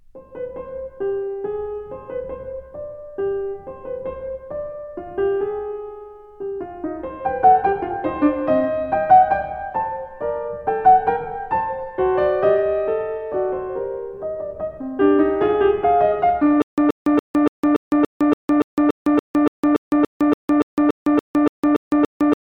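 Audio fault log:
16.62 s to end, stutter with silent gaps: a 128 ms burst of the music repeats 20 times, each followed by 158 ms of digital silence. A stalling player likely replayed its last fragment.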